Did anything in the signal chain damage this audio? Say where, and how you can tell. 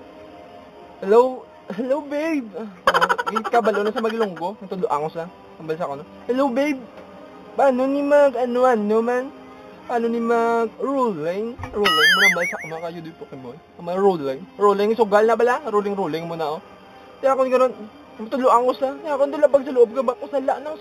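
Yes. The damage happened at sample-rate conversion, where the audio was raised from 8 kHz to 48 kHz by linear interpolation, and it runs through the whole clip. This imaging from linear upsampling dulls the top of the original band and leaves a faint light metallic shimmer on bright, sibilant content. Drawing straight lines between samples filters weakly, so a mirror copy of the 0 to 4 kHz band survives between 4 kHz and 8 kHz, about 25 dB down. On a spectrogram, the content mirrors faintly across 4 kHz.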